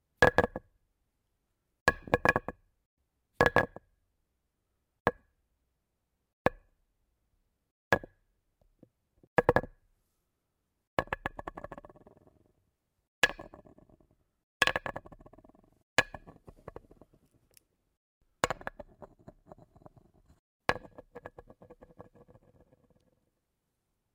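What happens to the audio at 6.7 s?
At 6.7 s the sound carries a faint hiss and grainy roughness that rides along with it, growing on louder and brighter moments and falling away whenever the level drops to silence. This is sample clock jitter, present across the whole clip rather than only at that moment. The converter's timing wanders by a few microseconds, so each sample is captured slightly off its proper instant. Steeper waveforms suffer larger errors, leaving a noise floor roughly 35 dB below the signal.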